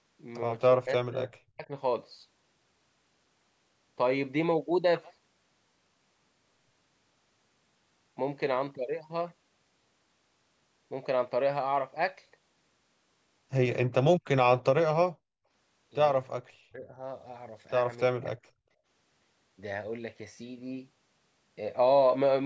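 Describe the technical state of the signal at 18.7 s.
At 18.7 s the signal is at the tail of a short dip from background gated by the echo canceller, running from 18.56 to 18.71 s. While far-end audio played, the canceller clamped the microphone, pulling the room sound down by about 32 dB before releasing it. On the waveform the envelope collapses to near-flat for that sliver, and the spectrogram shows a brief vertical gap in the noise floor, which tops out at 8 kHz as expected from call processing.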